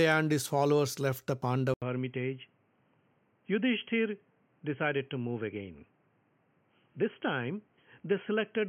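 Speech whose input was likely switched to a poorer device at 1.74 s, after "his followers left the": an 80 ms gap, then a duller, slightly quieter sound with faint new hiss to the end. The spectrogram loses everything above 3.2 kHz; the waveform shows a gap and smaller amplitude.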